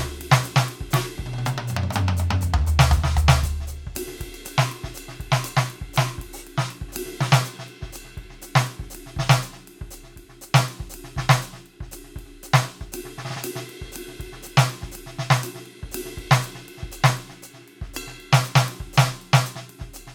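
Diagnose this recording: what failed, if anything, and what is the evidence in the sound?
Nothing in this music recording points to a failure at any stage of the chain, from the analogue wiring through conversion, buffering, processing and storage to playback.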